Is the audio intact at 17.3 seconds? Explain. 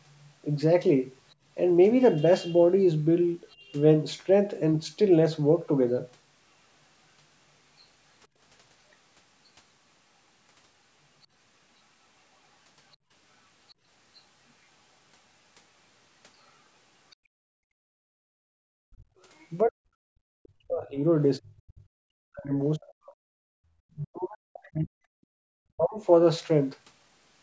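No, 17.3 s sits inside a stretch of background gated by the echo canceller, from about 17.15 to 18.53 s. While the far-end loudspeaker played, the canceller clamped the microphone down by about 31 dB, so the room sound drops out, then comes back once it lets go.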